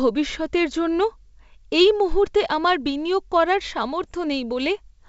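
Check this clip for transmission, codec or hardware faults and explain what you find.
Two short bursts of bit errors on an ADPCM link are audible, at 0.30–0.41 s and at 4.03–4.11 s, the second right after "মুহূর্তে আমার বিনিয়োগ করার". Flipped bits, a few tenths of a percent, disturb the decoder's adaptive step size and predictor. Each error therefore lingers for several milliseconds as pops, rough grainy bursts and brief jumps in level. The G.722 wideband coding itself carries the speech with little audible damage.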